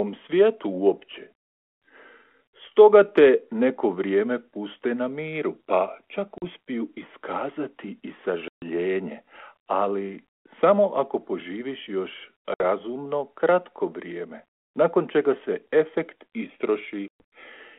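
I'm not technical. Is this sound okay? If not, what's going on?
No. The speech drops into brief silent gaps at 6.38, 8.48, 12.54 and 17.08 seconds, the longest about a seventh of a second, then returns slightly distorted. This is packet loss on an ADPCM call: chunks of the phone-line audio went missing.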